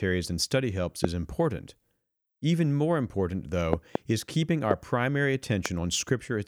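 A loud pop hits at 1.04–1.07 s, then a double pop spans 3.73–3.97 s, with single pops at 4.71–4.73 s and 5.66–5.68 s. Each is a sharp, brief thump peaking around 20 dB above the speech, which continues underneath. The likely cause is a sudden voltage step or spike, such as a switch, connector or static discharge, entering the chain and being shaped by the circuitry that follows it.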